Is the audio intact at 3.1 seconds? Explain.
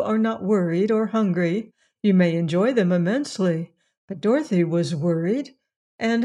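Yes, at 3.1 seconds the audio runs cleanly, with no dropout, click or other break in the signal.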